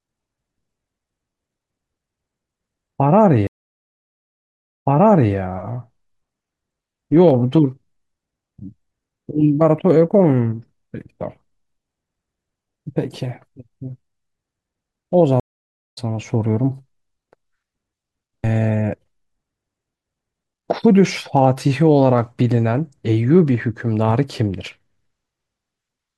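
At 3.47 s the speech drops out for about 1.35 s, and when it comes back at 5.34 s it repeats roughly half a second (0.53 s) you've already heard. That's a stream reconnect. The connection broke, the player restarted a fresh decoder and the server resent a chunk. It happens again at 15.40 s: about 0.54 s of silence, then at 15.98 s it jumps ahead, skipping around seven tenths of a second.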